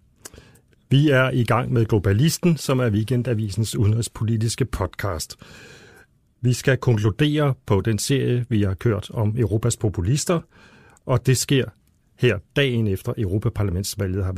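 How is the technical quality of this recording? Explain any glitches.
Nothing in this recording stood out as a technical problem on listening.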